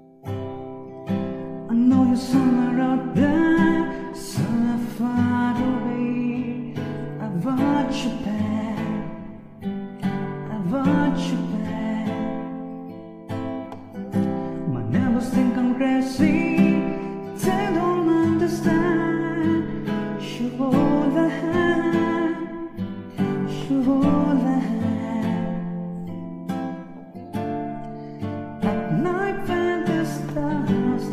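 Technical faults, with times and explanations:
No technical faults can be heard.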